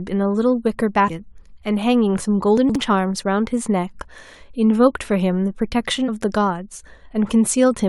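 At 1.08 s and again from 6.07 to 6.09 s, damaged data in the compressed stream makes the decoder lose sync, giving a brief glitch that shows as a short disruption on the spectrogram. From 2.57 to 2.75 s, chunks out of order put one 60 ms chunk two chunks late, producing a jumbled moment with three hard joins that appear as vertical broadband lines and broken harmonic traces.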